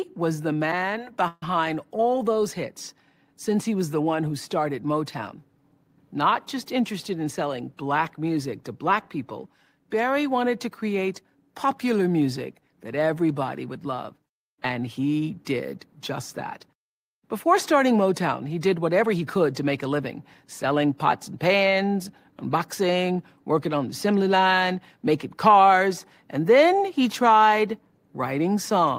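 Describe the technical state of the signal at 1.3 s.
At 1.3 s there is a call audio freeze (1.28–1.43 s), likely from a drained jitter buffer: a flat, smeared buzz fading into about 30 ms of silence before speech resumes intact.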